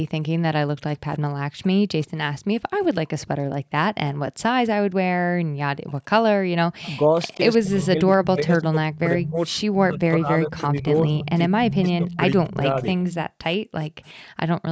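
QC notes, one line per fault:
0.28–6.68 s and 13.17–14.69 s, background gated by the echo canceller: the room sound drops away by as much as about 40 dB, roughly three seconds in total in the first stretch and about a second in the second. The canceller clamped the microphone while the loudspeaker played.
1.63–2.10 s, 3.19–3.27 s, 5.87–7.38 s, 8.93–9.51 s and 10.52–14.13 s, echo leak: a faint duplicate of the speech trails it by 130 ms. It starts at about 30 dB below the speech and grows to about 15 dB below by the last stretch. This is likely residual loudspeaker pickup that the far-end canceller failed to remove. Unlike gating, it adds sound rather than removing it.
6.96–12.85 s, speech suppressed in double talk: the talker's own speech dips by up to roughly 20 dB, about three seconds in total, while the other side is also talking. This is likely the canceller mistaking the talker for echo and attenuating both. 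The loss falls on the talker itself, not on the room background, which is what separates it from gating.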